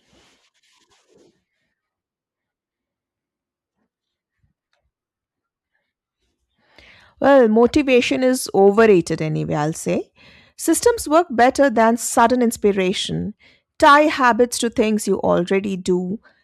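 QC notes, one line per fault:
Nothing to flag here; the speech comes through fine with no technical faults to note.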